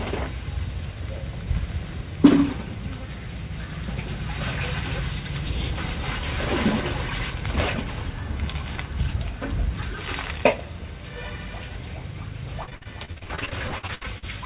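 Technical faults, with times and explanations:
12.64–14.24 s, repeated packet loss (robotic sound): about twenty closely spaced gaps, the longest 66 ms, are each patched by extending the preceding sound. Roughly a third of the span is filled this way, giving choppy stutter rather than one clean dropout.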